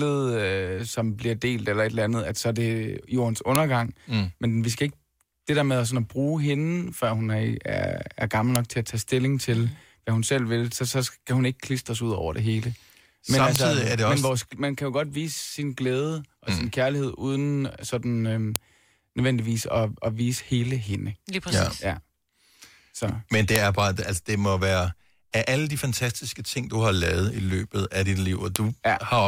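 At 13.56, 18.56 and 28.56 s, sharp, loud clicks cut into the speech. This is a file header played as audio. Pieces about 5 s long were joined with their headers left in. Those header bytes play as samples, snapping regardless of the speech.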